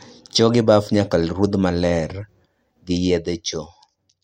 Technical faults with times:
2.74-4.23 zipper noise

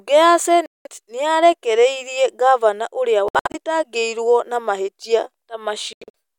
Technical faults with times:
0.66-0.87 Bluetooth dropout
3.28-3.55 Bluetooth dropout
5.93-6.10 Bluetooth dropout

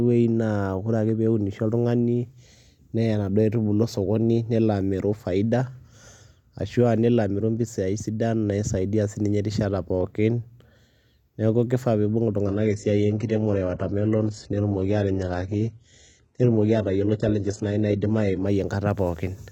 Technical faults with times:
12.47-18.47 adaptive stream at a lower bitrate

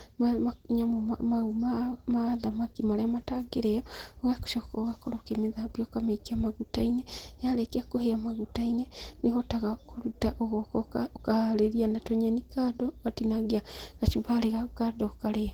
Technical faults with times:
0.00-15.53 Opus compression

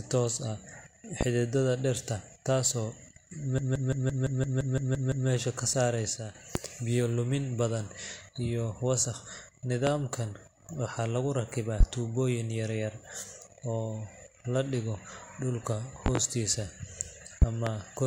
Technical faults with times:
1.21-1.25 loud pop
3.58-5.29 system hang loop
6.17-6.35 one channel drops out
6.55-6.59 loud pop
9.87-9.91 loud pop
11.80-11.84 loud pop
16.06-16.19 loud pop
17.42-17.70 loud pop

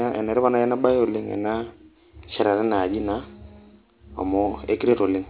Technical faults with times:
0.00-5.30 aliasing

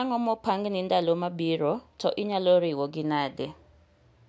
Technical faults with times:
none

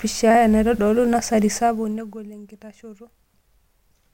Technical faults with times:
1.49-2.35 zipper noise

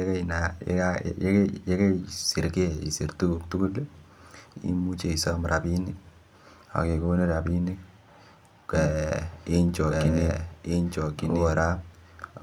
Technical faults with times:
8.74-12.43 doubled audio track

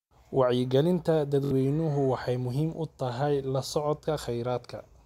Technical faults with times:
1.45-1.51 Bluetooth stutter

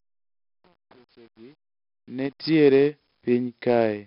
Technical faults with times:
0.00-4.06 4-bit ADPCM compression
0.00-2.44 truncation distortion on a fade

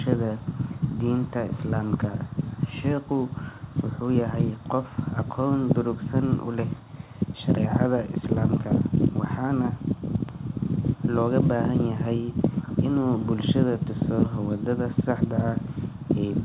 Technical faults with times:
none

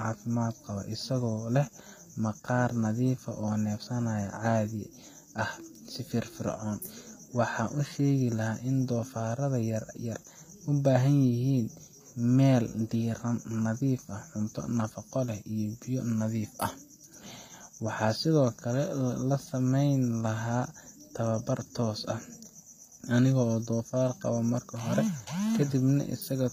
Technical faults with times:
0.00-26.52 HE-AAC compression

